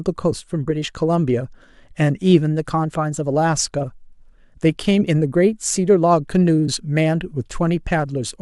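No technical faults can be heard anywhere in the recording; the signal stays steady and intact throughout.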